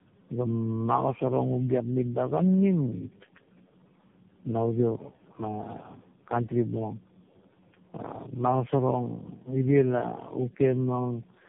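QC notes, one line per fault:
Throughout, tandem speech coding: the speech sounds rough, muffled and warbly, more so than one low-rate phone codec would make it, with nothing above 3.6 kHz. The signal passes through several speech coders in sequence, among them AMR-NB at 7.4 and 6.7 kbit/s and G.726 at 24 kbit/s, with G.711 links between them. Each stage decodes and re-encodes the previous stage's already damaged output, so the errors stack up.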